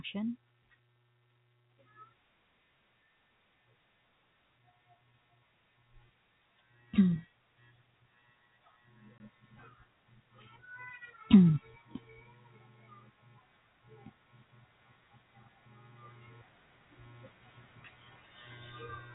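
Speech carried on a telephone-band channel, with nothing above 4 kHz. From 9.18 to 9.20 s there is packet loss filled with silence. A 20 ms gap cuts the speech abruptly, with hard edges. The length fits a single lost packet.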